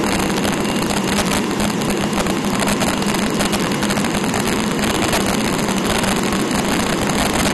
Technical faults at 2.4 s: integer overflow; MP2 compression

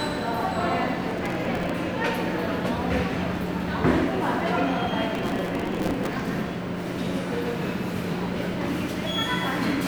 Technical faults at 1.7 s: processor overload crackle

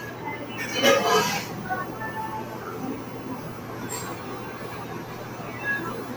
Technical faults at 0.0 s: noise suppressor applied to music or sounds

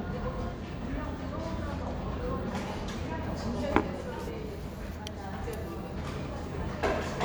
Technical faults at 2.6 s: none

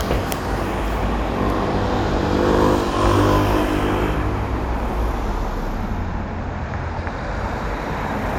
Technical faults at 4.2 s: none

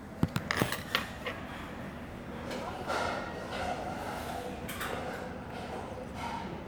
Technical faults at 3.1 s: none

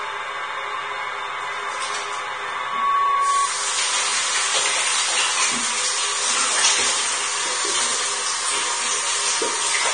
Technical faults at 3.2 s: Vorbis compression; loudspeaker feedback squeal

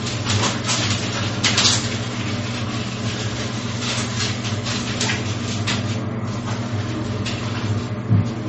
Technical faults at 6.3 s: low-bitrate audio saved at a high bitrate

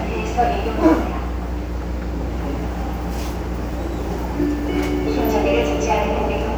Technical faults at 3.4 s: mains hum

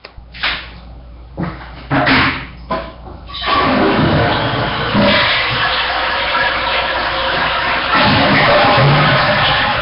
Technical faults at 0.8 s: hard clipping; Nellymoser compression

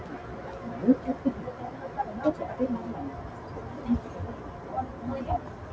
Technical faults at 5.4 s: noise suppressor applied to music or sounds

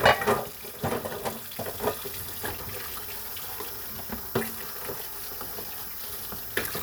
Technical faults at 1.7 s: periodic USB or driver dropouts

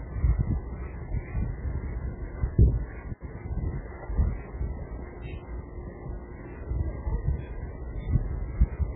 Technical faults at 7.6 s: MP3 compression

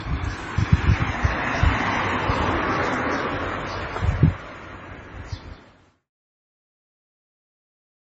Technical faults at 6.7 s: transcoding between lossy codecs

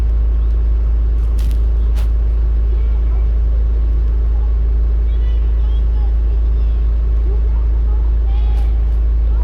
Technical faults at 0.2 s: none

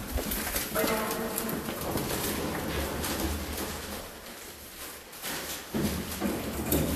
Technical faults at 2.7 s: Vorbis compression

